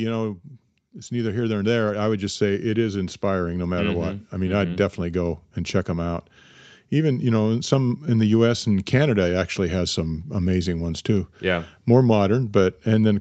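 Automatic gain rising from 1.07 to 5.47 s: the gain control judged the input too quiet and raised the level by about 8 dB, swelling speech and background together until "and check them out".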